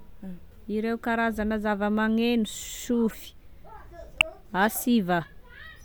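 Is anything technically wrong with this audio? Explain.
Yes. A corrupt frame decoded at 3.10 to 3.13 s and at 4.21 s: damaged compressed speech frames were played anyway, misplacing energy into a faint error, then a much louder one.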